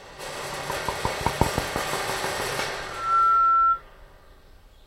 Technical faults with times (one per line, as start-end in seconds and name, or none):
2.86-3.82 loudspeaker feedback squeal